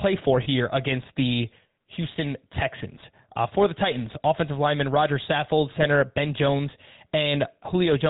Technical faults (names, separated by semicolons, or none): GSM full-rate codec; lost GSM frames